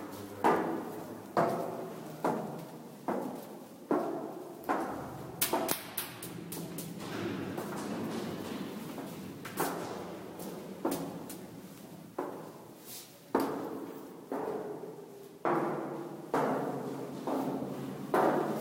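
No technical faults are audible.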